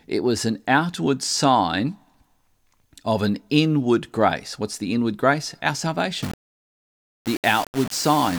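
From 6.22 s to the end at 8.38 s, the speech turns coarse and grainy, with a gritty buzz that rises and falls with the voice. Quieter stretches break up or sputter rather than fading smoothly. The error sits only about 15 dB below the speech. This is low bit depth without dither. The likely cause is that samples were rounded to a very small number of levels without dither, which fits about 5 bits.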